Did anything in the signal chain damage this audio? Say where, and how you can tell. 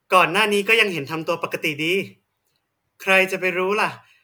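No, nothing in this speech recording points to damage at any stage of the signal chain. None of the stages, from the wiring and converter through to storage and playback, leaves a mark that can be heard.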